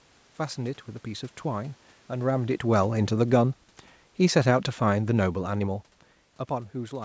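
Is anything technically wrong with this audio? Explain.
Yes, one thing. From 2.14 to 5.83 s there's automatic gain falling: the AGC found the input too loud or its background noise too strong and eased its gain down about 7 dB, so voice and room noise sink together.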